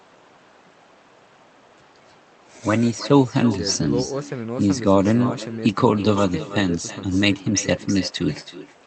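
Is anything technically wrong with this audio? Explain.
Yes. Throughout the speech there is an echo with no canceller. The far end is playing the call through a loudspeaker, its microphone captures that playback, and nothing subtracts it, so every phrase returns roughly a third of a second later, about 14 dB down and thinner than the original. On a waveform each syllable burst has a smaller trailing copy. On a spectrogram the same patterns repeat, shifted right and fainter, below the cutoff near 8 kHz from the call codec.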